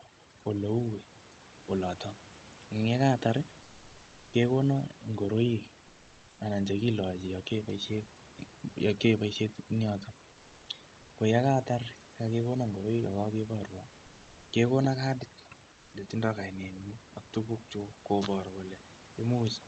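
Throughout the clip, overdone noise removal pushes individual frequency bands down whenever they sit near the noise estimate. The background collapses to near silence with twinkling specks. A spectrogram shows dark pauses flecked with isolated bright dots and frayed speech edges.

From 15.73 to 15.93 s, right after "kekona kadit", comfort noise in place of the background replaces 200 ms of the real background, which sits about 31 dB below loud speech. In its place is a smooth, featureless hiss about 1 dB quieter, likely from Opus discontinuous transmission. A spectrogram shows an evenly grey, textureless patch.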